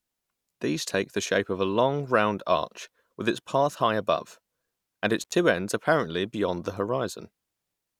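Speech, with one intermittent contact fault around 5.22 to 5.34 s. A loose cable or plug briefly loses connection, so the sound drops out for about 83 ms with a crackle at each edge, leaving faint hiss until the contact closes again.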